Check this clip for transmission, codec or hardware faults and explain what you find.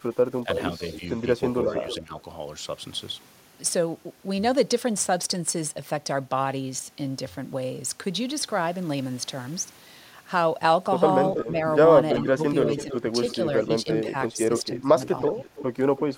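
Two echo-control faults appear in this speech, clustered at the start and near the end.

Echo leak, 0.54–1.97 s and 11.35–16.01 s: a faint repeat about 10 dB down, 320 ms and 328 ms late, likely from incomplete loudspeaker-echo cancellation. It shows as shifted, fainter spectrogram ghosts.

Speech suppressed in double talk, 0.44–2.12 s, 11.44–13.14 s and 14.06–15.4 s: the speech dips about 10, 10 and 15 dB. This is likely the canceller ducking overlapping talk, leaving notched waveform envelope gaps.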